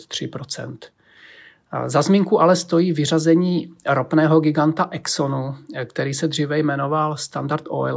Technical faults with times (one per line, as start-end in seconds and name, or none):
none